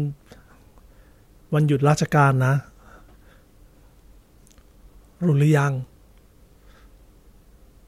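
No technical faults can be heard anywhere in the speech recording, so there is nothing to timestamp.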